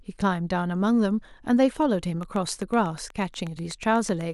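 From 2.23 to 4.22 s, a train of clicks ticks steadily over the speech, about eight per second, roughly fifteen in all. Likely interference or a faulty connection or power supply.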